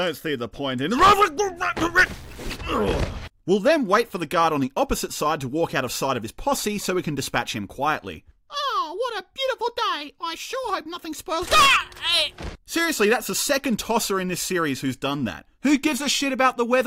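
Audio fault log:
2.06–2.56 s, stuck bit: one data bit was likely held at a fixed value by a broken line or converter, so each sample whose true bit differs is pushed off by that bit's weight, a step of about -40 dBFS. The error tracks the waveform, giving the sound a harsh, buzzy distortion for this half second. Because the bit also flips with the sign of small values, quiet stretches fill with noise near that level.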